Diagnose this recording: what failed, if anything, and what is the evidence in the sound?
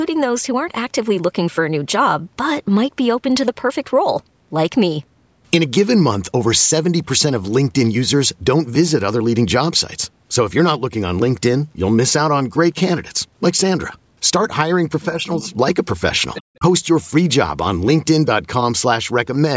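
Call processing is where this goes wrong. From 15.11 to 15.46 s the speech dips a few decibels, and at 16.59 to 16.64 s it briefly drops hard, nearly 20 dB. That's speech suppressed in double talk, likely the echo canceller mistaking the talker for loudspeaker echo and ducking everything.

Same stage, other direction: between 16.34 and 16.43 s a faint second voice slips through, around 15 dB under the talker. That's the other side's voice leaking through, likely because the echo canceller left some of the loudspeaker playback in the microphone signal. The band-limiting, with nothing above 8 kHz, is normal for the call chain.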